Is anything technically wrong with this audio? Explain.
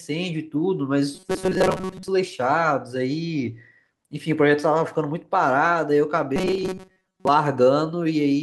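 Yes. Robotic sound from repeated short buffers appears from 1.15 to 2.08 s and again from 6.36 to 7.28 s: the speech becomes a rigid, metallic buzz fixed near 188 Hz. The likely cause is a roughly 5 ms buffer looping while most incoming audio is skipped.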